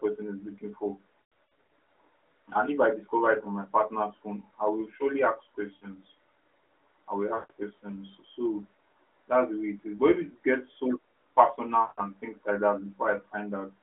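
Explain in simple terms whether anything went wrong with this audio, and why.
Around 1.22 to 1.70 s the speech stutters and smears, then briefly fades. Shorter drawn-out, dimming patches follow at 5.76 to 5.88 s, 7.34 to 7.51 s and 11.82 to 12.02 s, each recovering a little rough. These are lost AMR speech frames: radio errors corrupted small chunks of the phone signal, so the decoder stretched the last good sound while fading it out. The first patch is scattered gaps rather than one long hole.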